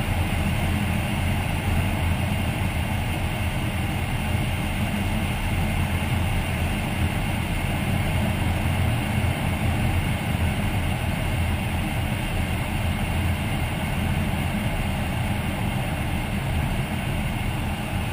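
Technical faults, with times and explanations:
No technical faults detected.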